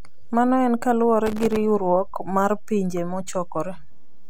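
A constant DC offset runs through the whole recording: the entire waveform sits shifted away from zero by a fixed amount. The listener cannot hear the offset itself, but it shows up as steady energy at the very bottom of the spectrum, beneath the speech, and it uses up headroom. The signal reaches clipping sooner on one side than the other, so a loud passage would distort earlier than it should.

From 1.26 s to 1.56 s there is processor overload crackle. The processor fell behind and missed audio deadlines again and again over this short stretch. Each missed buffer was output as a short dropout of silence with hard edges. The gaps come very close together, which fits very short buffers of around a millisecond and a half and points to roughly thirty misses. Over those 0.3 seconds they merge into a gritty, tearing crackle laid over the speech, and it stops once the load clears.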